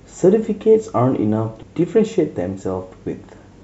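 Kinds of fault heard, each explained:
Compressed frames skipped: at 1.62 s the speech jumps ahead by about a fifth of a second, because a run of several compressed frames, consistent with frames of roughly 26 ms, was missing or rejected as damaged, so never played.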